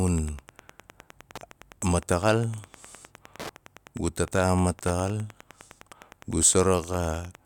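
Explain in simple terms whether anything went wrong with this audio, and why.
A steady ticking, about ten times a second, runs under the speech from start to end. This is Wi-Fi interference. A nearby radio's regular signal leaks faintly into the audio circuit.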